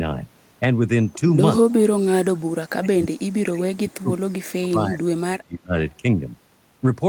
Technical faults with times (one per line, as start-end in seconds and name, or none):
1.62-1.77 speech suppressed in double talk
2.08-4.31 speech suppressed in double talk
4.60-5.01 speech suppressed in double talk
5.29-5.75 speech suppressed in double talk